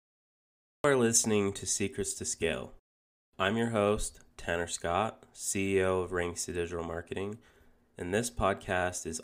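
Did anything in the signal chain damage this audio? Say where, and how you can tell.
Yes. There is a cut-off start at the capture or recording stage. The clip opens with digital silence from 0.00 to 0.84 s, then the speech appears abruptly at 0.84 s, just before "listening to", already in progress with no natural attack or fade-in. Recording began after the speaker had started, so the first part of the sound was never captured, and the waveform starts mid-sound instead of from a clean onset.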